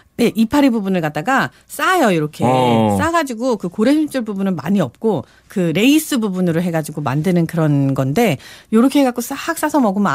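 Nothing in the speech stood out as a technical fault on listening.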